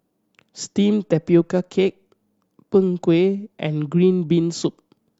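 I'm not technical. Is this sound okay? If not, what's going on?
Yes, I listened to this speech recording and nothing about it stood out as a problem.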